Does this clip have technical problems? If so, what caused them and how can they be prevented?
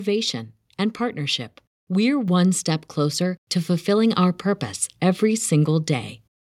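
Yes. At 2.28 s, between "and partnership we're" and "step closer to fulfilling", the microphone volume stepped up: the call software judged the input too quiet and raised the device's input level in one move, by about 4 dB. Speech and background noise jump together, so on a waveform the envelope widens abruptly, and on a spectrogram every band, including the noise floor, brightens at once. Disabling automatic microphone gain adjustment and setting a fixed input level prevents this.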